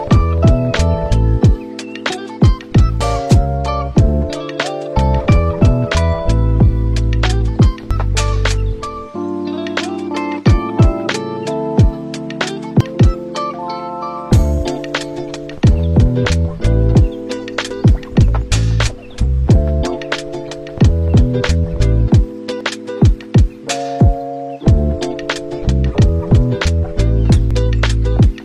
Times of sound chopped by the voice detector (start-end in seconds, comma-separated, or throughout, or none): none